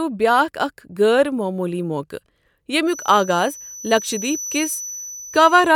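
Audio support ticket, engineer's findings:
Feedback whistle from 2.84 s to end of clip. Thin steady tone at 6 kHz, about 15 dB under the speech, level swelling and fading slowly. Likely cause: loudspeaker-to-microphone loop held right at feedback threshold. One frequency sustains without running away.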